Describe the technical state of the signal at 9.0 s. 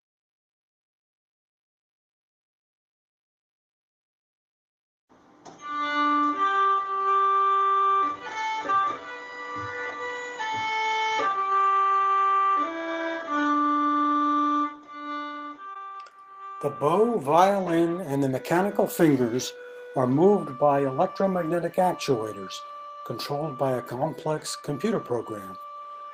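A jitter buffer slow-down runs from 8.85 to 9.31 s: repeated pitch periods add 80 ms, stretching the sound to 84% speed at unchanged pitch.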